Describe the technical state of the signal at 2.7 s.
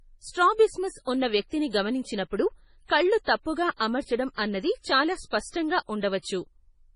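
At 2.7 s the speech is passing through heavy MP3 compression, likely at a low bitrate around 24 kbps, present across the whole clip. Starved of bits, the encoder cuts everything above 10.5 kHz and drops weak frequency lines, so the sound is dull, watery and swirly, with smeared consonant attacks.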